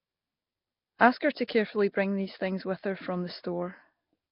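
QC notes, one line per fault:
Throughout: Nellymoser compression. The speech carries a rough, hissy halo and a smeared, underwater quality, with heavy damage across the whole clip and nothing above 5.3 kHz. This is likely the Nellymoser Asao codec, which spends a fixed, small bit budget on each short block, so weaker bands get no bits and are replaced with noise. The depth of the damage points to a bitrate around 22 kbps.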